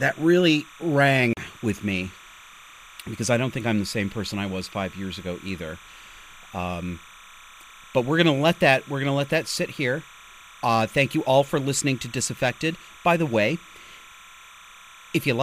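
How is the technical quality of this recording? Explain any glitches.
Two faults affect the recording. One runs through the whole clip, and one is a brief dropout near the start.

Timecode bleed is present throughout. Linear timecode from a nearby track or cable has leaked into the speech. It chirps and warbles behind the voice, around 25 dB below it. The square-wave code flips between tones around 1 kHz and 2 kHz. Its pattern fits 29.97-frame timecode.

From 1.33 to 1.37 s the sound cuts to silence for 37 ms, then continues. The likely cause is a Bluetooth stall. Interference delayed packets, the headphones' buffer emptied, and playback paused until resent data arrived.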